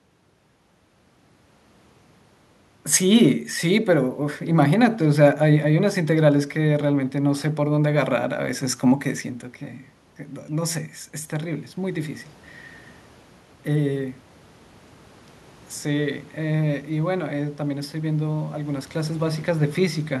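Around 8.5 s the level changes the way it does when a talker shifts relative to the microphone, which isn't a system fault. The real issue starts at 15.86 s: automatic gain rising. The gain control decided the input had gone too quiet and began pushing its gain up, slowly, through to 20.05 s, adding about 6 dB. You hear the speech and the room noise swell together, so the background gets louder right along with the voice.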